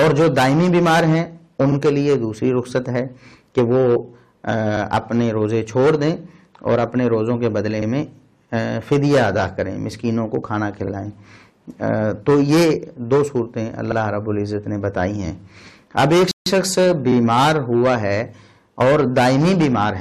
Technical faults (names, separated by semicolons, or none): rebuffering stall